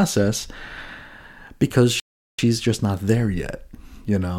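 A short speech clip with a rebuffering stall from 2.00 to 2.39 s. Playback ran out of downloaded audio and halted for about 0.39 s, then resumed exactly where it stopped at "just not there". Nothing is lost, but time is added. On a waveform this shows as a flat gap, and on a spectrogram as a blank column with clean edges.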